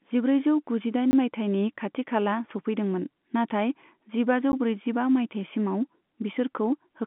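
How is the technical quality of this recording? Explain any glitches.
The recording carries two brief dropouts against a telephone-band background, with nothing audible above about 3.8 kHz.

Block of digital silence, 1.11 to 1.13 s (20 ms) and 4.52 s (12 ms): the sound drops to silence, likely because the output buffer went unfilled in time. It shows as a flat line in the waveform and a thin vertical gap in the spectrogram.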